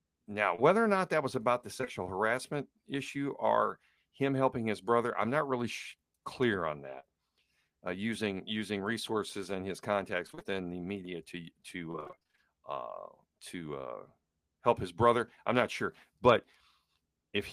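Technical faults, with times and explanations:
0.55–0.60 s, short concealed packet loss: a brief smear in the speech. About 20 ms of audio, which fits a single 20 ms packet, never arrived in time. The decoder continued the preceding sound for roughly 26 ms before blending back into the real signal.
1.78–1.88 s, short concealed packet loss, three in a row: a quick wobble or flutter. Three consecutive 20 ms gaps were each patched by extending the last sound for 12 to 18 ms, so the concealment runs together across about a tenth of a second.
7.00–7.05 s, short concealed packet loss, just after "clear on": a slightly longer smear, where a short consonant may blur away. About 40 ms went missing, likely two packets, and roughly 36 ms of continued sound covered the hole before the real audio resumed.
10.27–10.52 s, repeated packet loss (robotic sound), between "using resources and his" and "the media to": choppy, broken-up speech. 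Five gaps totalling 100 ms, the longest 23 ms, came in close succession, so about half of this stretch is synthetic continuation.
11.91–12.39 s, repeated packet loss (robotic sound), between "the media to" and "uh to uh help": a longer run of the same choppy, broken-up quality. Twelve gaps totalling 240 ms, the longest 29 ms, left half of this span filled by concealment.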